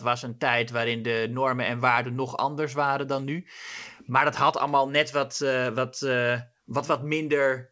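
No technical faults can be heard in the speech, which carries the band-limited character of a WebRTC call path, with nothing above 8 kHz, consistent with a wideband codec such as G.722 at 64 kbps.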